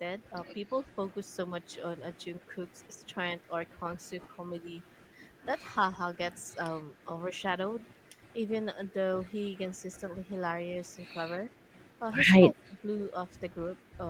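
At 2.40 to 2.44 s, 2.97 to 3.07 s and 12.35 to 12.76 s the speech drops sharply, deepest at the end (around 20 dB). This is speech suppressed in double talk, likely an echo canceller turning down the near talker while the far side spoke.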